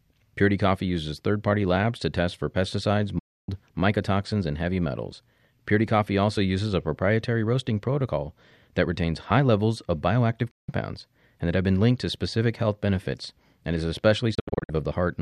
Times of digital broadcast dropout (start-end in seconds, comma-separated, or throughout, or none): 3.19-3.49, 10.51-10.69, 14.35-14.70